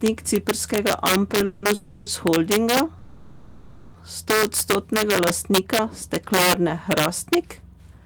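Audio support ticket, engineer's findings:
Integer overflow, throughout: violent cracks on loud speech peaks, drive about 9 dB over full scale, a small fraction of samples affected. Gain stage wraps instead of limiting. Waveform shows peaks jumping to the opposite rail. Spectrogram shows broadband vertical streaks.

Call audio freeze at 1.45–1.65 s, 1.74–2.09 s and 2.98–3.97 s: the last sound is held as a fading buzz or hiss for 170, 320 and 960 ms, then the speech resumes with nothing lost. Likely cause is a jitter buffer underrun from delayed packets. Spectrogram shows smeared flat bands, and latency grows after each freeze.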